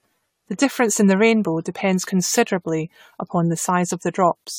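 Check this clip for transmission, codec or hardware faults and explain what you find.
One codec fault runs through the whole speech clip: generation loss. The sound is swirly, smeared and hollow, with blurred attacks and nothing above 19.3 kHz. The likely cause is around ten passes through an AAC-LC encoder near 96 kbit/s, each re-quantising on a shifted frame grid so noise and spectral holes accumulate.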